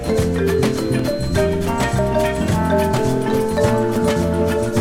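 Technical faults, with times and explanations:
0.99 s, 1.99 s and 3.96 s, overlap between stream segments: at each of these joins of the 1.0 s segments, 5 to 13 milliseconds of audio that should have played are trimmed away. The waveform jumps straight across as a click or tiny skip, with no silent gap as a dropout would leave.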